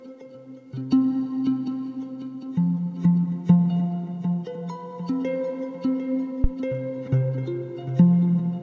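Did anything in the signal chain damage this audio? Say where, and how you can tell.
Yes. A phantom power thump sits in the analogue input stage at 6.44 to 6.50 s: a deep, low thump that dies away in about 14 ms, as supply voltage switching steps through the coupling capacitors. Unlike a click, it is low-pitched. The call path's ceiling near 8 kHz fits G.722.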